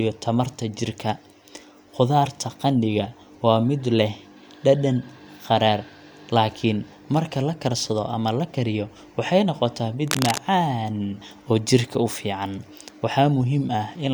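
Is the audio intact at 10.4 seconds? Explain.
No. A burst of cable scratch noise runs from 10.07 to 10.39 s and ends right at that moment. It sounds like a dense, uneven scratching or rustling laid over the speech, fairly loud at roughly 5 dB below it. The likely cause is a worn cable, connector or control being moved. Its contact resistance then shifts rapidly and erratically. Those jumps inject the ragged bursts of noise heard here.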